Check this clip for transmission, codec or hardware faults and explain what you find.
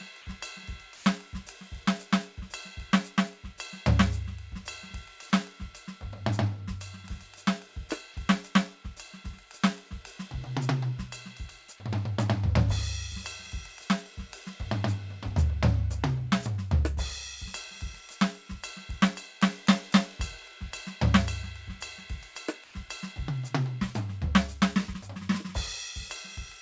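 Two short spots where the real background drops out can be heard in this music, both the same kind of fault. Across the whole clip nothing reaches above 8 kHz, which fits a wideband call codec such as G.722.

Comfort noise in place of the background, at 0.96–1.06 s and 22.64–22.74 s. Each time, during a quiet stretch where the background sits about 25 dB and about 27 dB below the loud passages, 100 ms of the actual ambience is replaced by a flat, featureless hiss. The first time it is at the same level, and the second time it is about 2 dB quieter. This is likely discontinuous transmission: the sender's voice detector took the quiet music for silence and stopped sending, and the receiver filled the gap with synthetic noise only roughly shaped like the real background.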